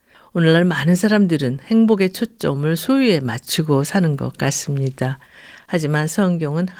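Nothing in this speech recording stood out as a technical fault on listening.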